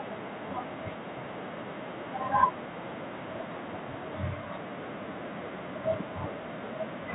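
No technical faults occur at any point in the speech, so there is nothing to describe in time order.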